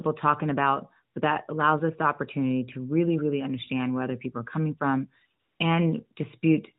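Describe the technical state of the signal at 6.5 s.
At 6.5 s the speech is intact, with no fault present, only the narrowband sound of the AMR-NB mobile codec path, which cuts everything above 4 kHz and runs here in its 12.2 kbps mode.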